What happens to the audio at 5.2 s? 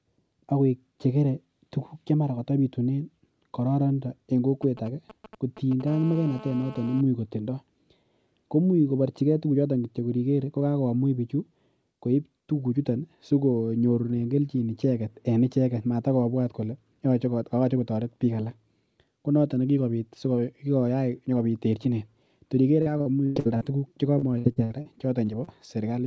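A nearby 2G phone is exchanging short signalling bursts with its network, and the audio circuit rectifies that radio energy into the signal. These GSM signalling bursts run from about 4.62 s to 5.82 s, so 5.2 s falls in the middle. They come through as a galloping dit-dit-dit of short 217 Hz buzzes, sitting roughly 15 dB below the speech.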